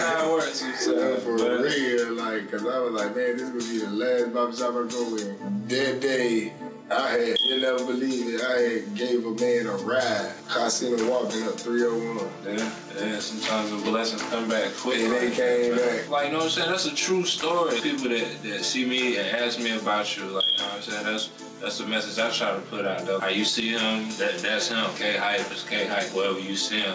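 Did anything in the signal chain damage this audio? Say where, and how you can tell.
Yes. Gain pumping runs throughout: the gain swings around 5 dB under loud sounds, likely excessive input gain hitting a fast limiter.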